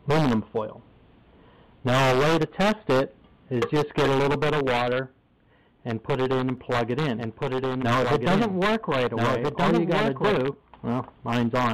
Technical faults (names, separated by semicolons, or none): doubled audio track